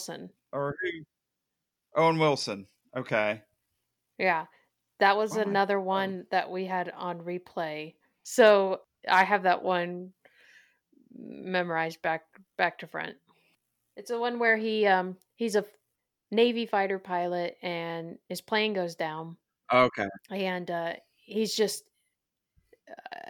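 Listening to this speech recording, nothing technical stood out as wrong at any point.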